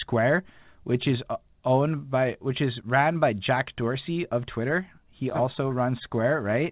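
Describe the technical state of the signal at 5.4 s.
At 5.4 s the speech is intact, carried through the call path with nothing above 4 kHz, which fits a G.711 mu-law codec at 64 kbps.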